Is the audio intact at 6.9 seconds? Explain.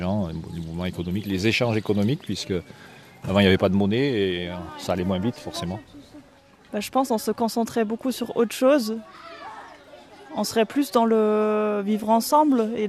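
Yes, the audio is intact at 6.9 seconds, with no dropout, click, distortion or other fault audible at that moment.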